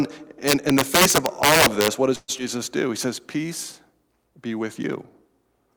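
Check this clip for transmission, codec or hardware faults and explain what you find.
Four distinct faults appear in this speech clip, all in the first three and a half seconds.

From 0.48 to 1.88 s there is integer overflow. Loud passages are driven about 6 dB past the integer limit, and instead of being clamped the samples wrap to the opposite sign. Each peak therefore snaps across the whole range and produces sharp cracks, harsher than ordinary clipping. On the waveform, crests suddenly jump to the opposite polarity. On a spectrogram these show as thin vertical broadband streaks at each loud moment.

From 2.15 to 2.30 s the audio freezes. The last sound is stretched into a buzzy continuation for about 128 ms, then drops into roughly 20 ms of silence before the speech resumes exactly where it left off. No audio is lost; the clip simply runs 128 ms later from here. The likely cause is a call audio freeze, where delayed packets left the jitter buffer empty and the receiver extended what it last had. 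A spectrogram shows a frozen, smeared band fading into a short blank.

At 2.38 to 2.41 s there is short concealed packet loss. About 40 ms of audio never reached the decoder. Only about 4 ms of synthetic continuation bridges the hole before the audio blends back into the real signal, so timing jumps forward by roughly 40 ms. It is heard as a tiny smear or skip. On the spectrogram it appears as an abrupt discontinuity in the harmonics, and on the waveform as a splice.

From 2.87 to 3.48 s a jitter buffer slow-down stretches the audio. The receiver repeated single pitch periods to rebuild its reserve, adding 47 ms and playing this stretch at 94% speed without changing pitch. Sounds drag slightly longer than natural. A spectrogram shows horizontally elongated harmonics at unchanged spacing, and the waveform shows identical cycles repeated in a row.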